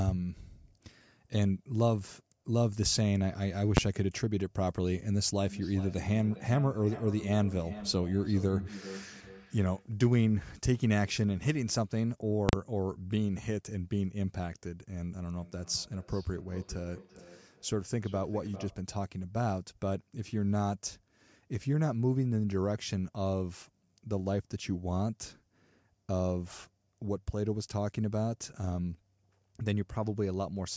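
At 3.77 s a single loud bang cuts through the speech. It is invalid numbers at full scale: a calculation produced infinite or invalid values, and a 10 ms block was pinned to the maximum output level.

From 5.43 to 9.92 s each phrase comes back about every 0.4 s, at its loudest about 14 dB below the speech, thinner and more ringing each time. This is feedback echo between two devices. A second device in the room replays this microphone's audio, and that microphone picks it up again. Neither echo canceller removes the other device's playback.

At 12.49 to 12.53 s the same invalid numbers at full scale fault returns over a 40 ms block. It is heard as a sharp pop at each edge with silence between.

From 15.33 to 18.87 s the feedback echo between two devices recurs. It again repeats at roughly 0.4 s intervals, now peaking about 18 dB below the speech.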